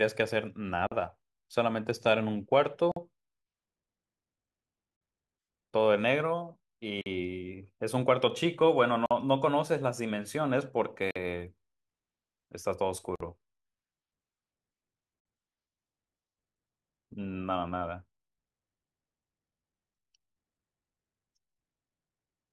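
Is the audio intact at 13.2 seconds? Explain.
No. From 13.16 to 13.20 s the speech breaks for a silent gap of 48 ms, a gap at a join of encoded pieces. The audio was encoded in separate pieces, and each piece kept its leading encoder delay and final frame padding, so silence sits at the seam. Gaps like this recur every 2.0 s. Unlike a dropout, no speech is lost. The edges are smeared by the codec, and the sound resumes exactly where it stopped.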